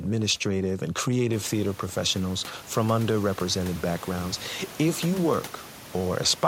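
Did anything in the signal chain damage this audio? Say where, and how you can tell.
No, nothing in the signal chain stood out on listening; the room noise that rises by about 14 dB at roughly one and a half seconds is part of the recorded space and stays about 20 dB below the speech.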